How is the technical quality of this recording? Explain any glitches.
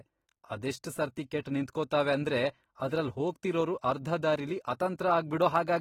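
The recording carries plainly audible lossy-coding damage throughout. The sound is dull and smeared, with a fizzy, warbling edge on sibilants and sustained sounds, which points to AAC compression, likely AAC-LC at a low bitrate near 30 kbps, starving high frequencies and leaving spectral holes.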